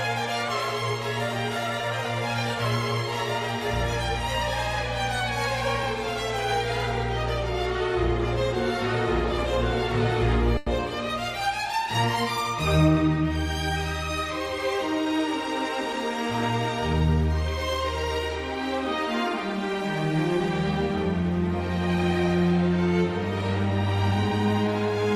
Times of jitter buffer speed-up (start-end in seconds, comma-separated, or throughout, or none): 14.78-15.20